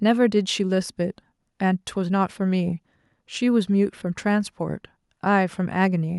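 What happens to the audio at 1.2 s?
Nothing goes wrong at 1.2 s: the speech carries on intact through that moment, with no dropout, click, distortion or other fault to be heard.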